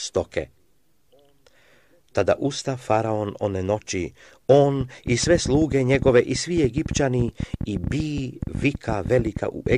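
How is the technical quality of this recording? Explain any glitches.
The second half of the recording is marred by a train of clicks running from 4.81 s to 9.74 s, about twelve per second at an uneven pace, around seventy in all, with peaks jutting well above the level of the sound. Each click has much the same sharp shape, which likely points to interference or a faulty connection or power supply pulsing into the signal. That repeated, near-identical shape sets it apart from random crackle, and the ticking persists through quieter moments too.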